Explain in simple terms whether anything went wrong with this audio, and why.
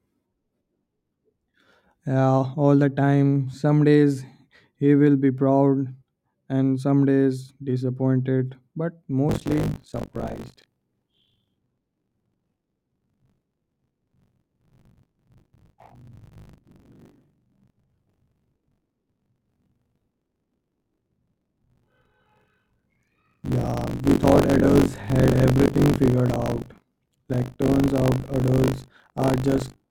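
From 9.28 s to the end, the speech takes on a robotic 50 Hz rattle. This is buffer tearing: about a fifth of each chunk replays audio from a lap earlier. Unlike mains hum, it disappears in pauses and is only heard with sound.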